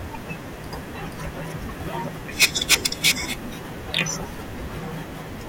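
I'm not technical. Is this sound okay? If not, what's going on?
No. This speech has hard clipping: the loudest parts were too big for the recording to hold, so their peaks got chopped flat. You hear a harsh fuzz from 2.41 to 3.11 s and a brief crackle from 3.94 to 4.01 s. Unlike a bad cable's random crackle, it appears only on loud moments.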